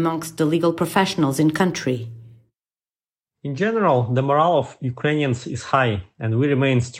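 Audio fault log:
No fault found in this speech clip.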